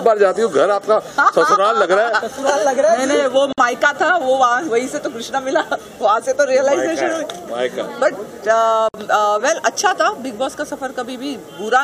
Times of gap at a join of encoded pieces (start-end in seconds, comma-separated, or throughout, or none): 3.53-3.58, 8.89-8.94